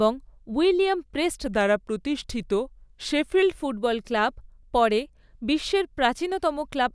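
A wrong sample rate runs from 1.46 s to 3.42 s, just after "উইলিয়াম প্রেস্ট" and ending before "ফুটবল ক্লাব পরে বিশ্বের". The samples are played back slower than they were captured, with no conversion, which fits audio recorded at 24 kHz being played at 22 kHz. Speed drops to 0.919 times normal and pitch falls by about 1.5 semitones together, so the speech sounds slightly deeper and draggier for that stretch.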